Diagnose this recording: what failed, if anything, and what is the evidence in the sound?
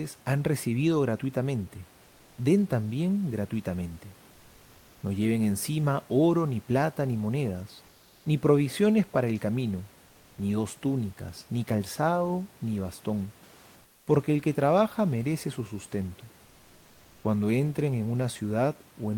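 Comfort noise in place of the background fills pauses at 7.87 to 8.23 s and 13.83 to 14.07 s, a codec-stage effect, likely Opus discontinuous transmission. The detailed room noise becomes steady hiss, about 2 dB and 6 dB quieter, showing as flat, textureless spectrogram blocks with abrupt edges.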